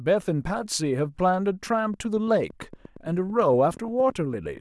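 From 1.94 to 4.58 s, a train of clicks ticks over the speech at about 8.7 per second, evenly spaced, near signal level. Likely interference or a faulty connection or power supply.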